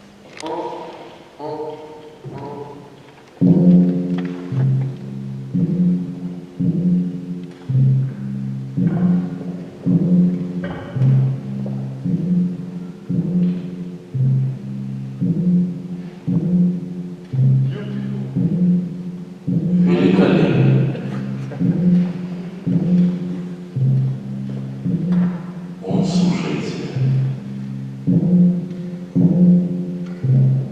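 No technical faults are audible.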